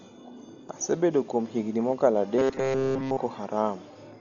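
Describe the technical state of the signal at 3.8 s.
Dolby Digital compression is the likely cause of what is heard at 3.8 s, and it runs through the whole clip. Nothing in the speech reaches above 7 kHz, so it sounds dull. The remaining band has a rough, fluttering noise around its tones. The damage is heavy, which points to a very low bitrate around 40 kbps. At that rate the encoder narrows the band and leaves many frequency lines without real data, and the decoder fills them with noise.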